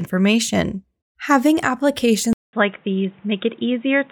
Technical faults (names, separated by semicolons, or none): input switched to a poorer device